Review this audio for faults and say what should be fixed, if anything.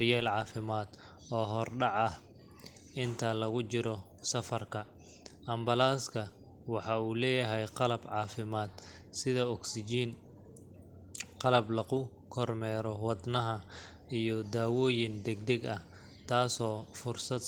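Nothing here needs fixing: the speech runs through Opus voice compression in its hybrid mode at fullband, so the top of the band reaches about 20.3 kHz and the coding leaves only light traces at this 20 kbps rate.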